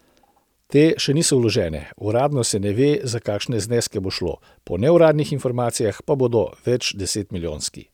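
Nothing goes wrong anywhere in this bit of speech; there's simply no technical fault to point to.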